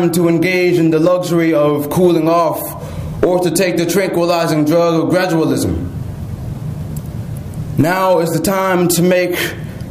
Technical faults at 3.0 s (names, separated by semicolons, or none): none